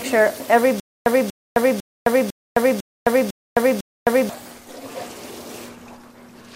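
Playback likely stalled and kept retrying from 0.80 s to 4.29 s, producing a stutter with silent gaps: the same 0.24 s fragment plays seven times, each followed by about 0.26 s of dead silence, repeating every 0.5 s while the intended audio is lost.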